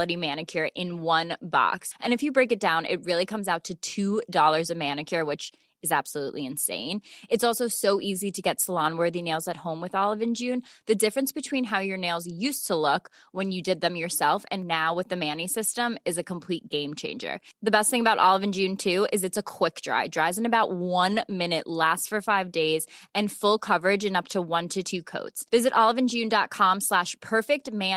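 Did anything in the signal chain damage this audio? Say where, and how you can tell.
Yes. At the network stage, around 14.83 to 14.97 s, the speech briefly turns rougher and noisier without any gap. That is a lost packet rebuilt from error correction: lost packets were replaced by low-bitrate copies carried in the following packets, about 80 ms in total.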